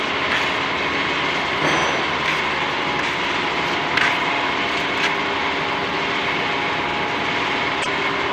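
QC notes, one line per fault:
1.81 s and 6.91 s: overlapping chunks, where 50 ms is replayed at each join, heard as a stutter; the waveform shows a repeated 50 ms segment with a discontinuity at each seam.
7.79–7.87 s: damaged data in a compressed stream, where the decoder loses frame sync, producing a brief disturbance as it searches for the next frame header.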